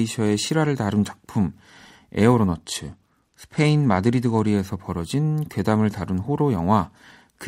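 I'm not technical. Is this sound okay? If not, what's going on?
No. From 2.54 to 4.50 s the speech turns dull and gritty: a Bluetooth SBC bit pool drop, where a congested wireless link squeezed the audio's data until it recovered.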